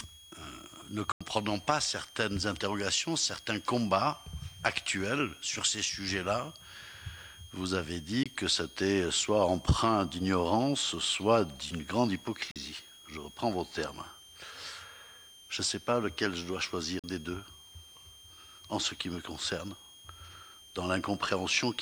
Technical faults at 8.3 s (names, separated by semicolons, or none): switching supply whistle; Bluetooth dropout